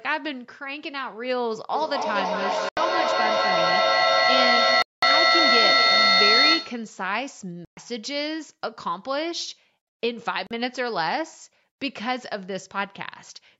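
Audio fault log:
1.73–6.99 s, feedback echo between two devices: The speech is followed by repeats spaced roughly a fifth of a second apart. Each pass comes back thinner and more ringing, and at its peak the echo is about 7 dB louder than the speech itself, so the repeats build up rather than fade. A second device in the same room is playing this call back into the microphone, and the echo canceller can't remove sound it didn't play.
2.69–2.77 s, 4.82–5.03 s, 7.65–7.77 s, 10.47–10.51 s, Bluetooth dropout: The audio cuts out four times, for about 81 ms, 203 ms, 122 ms and 41 ms. When it returns, the speech has moved on as though it had kept playing through each gap. The likely cause is that audio packets reached the Bluetooth headphones too late to be played and were discarded, leaving silence until packets arrived in time again.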